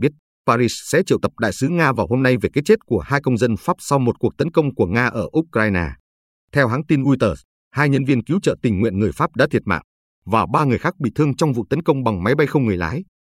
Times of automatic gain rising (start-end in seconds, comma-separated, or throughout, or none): none